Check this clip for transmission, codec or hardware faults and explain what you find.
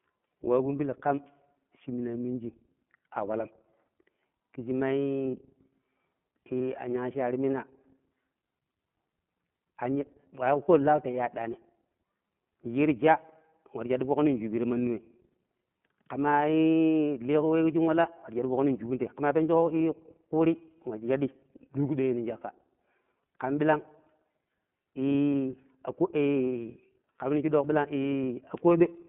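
Two faults are present: the whole recording has been carried through the iLBC codec, and one short stretch was lost in transmission.

iLBC codec, throughout: the audio went through a narrowband VoIP coder that encodes each 30 ms block independently, at a rate that fits its 13.33 kbps mode. The channel passes only about 150 Hz to 3.4 kHz, so the speech sounds thin and muffled with no upper sibilance. The codec damage is plainly audible as a rough, slightly synthetic texture.

Lost iLBC frames, 5.31 to 5.34 s: a packet went missing, and the length of the gap, 30 ms, points to a single lost frame. The decoder filled the hole by repeating the last pitch cycle blended with noise. The result is a brief held, faintly buzzy vowel-like smear. Because each iLBC frame decodes on its own, the speech comes back clean straight after.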